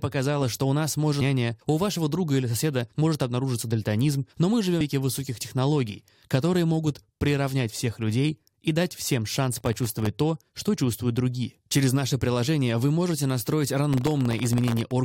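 At 4.80 s, between "обнаружиться дальтонизм но мы" and "высоких технологий которые могут", damaged data in the compressed stream makes the decoder misread a frame and lose sync while hunting for the next header. It comes out as a brief glitch in the speech.

From 9.53 to 10.07 s, after "людей и дать всем" and before "то что чувствуют другие", and again from 13.93 to 14.92 s, processor overload crackle appears. The processor misses deadline after deadline on very short buffers, well under a millisecond, each leaving a hard-edged drop to silence. Dozens of these dropouts in a row give a gritty tearing crackle over the speech, and the second burst is longer and denser.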